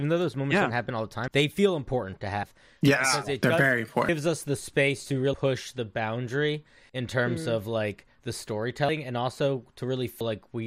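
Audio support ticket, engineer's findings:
Compressed frames skipped, seven events, each a sudden forward jump in the speech. Times: 1.27, 2.43, 4.08, 5.33, 6.89, 8.88, 10.20 s. Lost stretches roughly 100 to 300 ms each. Landmarks: after "they feel important to"; between "the boundary" and "in terms mm of"; after "mm of like the". Fits whole 24 ms frames missing or rejected by the decoder.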